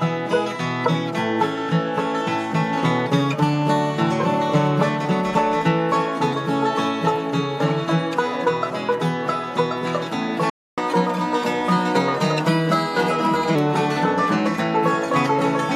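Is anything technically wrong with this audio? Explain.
Yes, there are two related problems.

From 10.50 to 10.78 s there is a playback stall: the sound halts for about 0.28 s, likely because the player ran short of data, then resumes.

From 10.78 to 13.55 s comes catch-up at higher speed: the backlog plays 1.1 times fast, pitch up roughly one and a half semitones. Unlike a sample-rate mismatch, it returns to normal afterwards.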